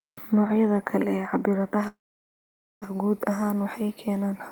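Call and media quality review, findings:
Call audio freeze, 1.87–2.84 s. Speech stalls, last sound held and fading, then about 0.88 s silence; resumes at "guud ahaan waxay keeneen" with nothing dropped. Likely jitter buffer underrun from delayed packets; 0.94 s gap inserted, latency up 0.94 s.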